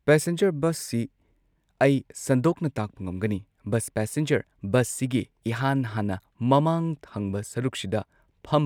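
Speech recording with no audible technical faults anywhere in the clip.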